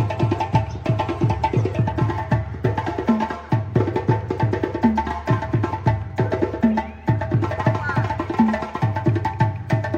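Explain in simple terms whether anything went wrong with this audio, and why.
Nothing stood out as wrong when listening to this recording.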